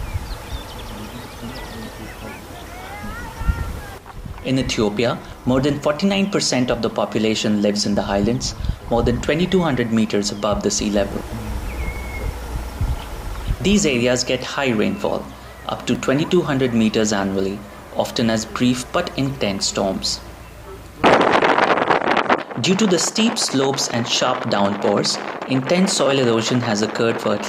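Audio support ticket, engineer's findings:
Likely audio missing between chunks: capture drops a few milliseconds at each 4 s chunk handover and splices the ends together. Result: brief skips at 7.97, 11.96, 15.95, 19.95 and 23.94 s.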